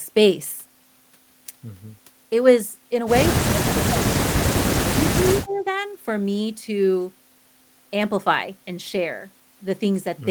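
Speech suppressed in double talk at 3.33 to 4.02 s and 4.84 to 5.65 s: the speech dips by up to about 30 dB, then about 25 dB, for roughly half a second and 0.7 s. This likely comes from an echo canceller turning down its own talker along with the loudspeaker echo when they overlapped.

Echo leak at 5.49 to 5.62 s: a faint scrap of delayed speech, about 30 dB below the main voice and arriving 115 ms late, slips through. Likely a loudspeaker echo the loudspeaker side's canceller failed to remove and sent back.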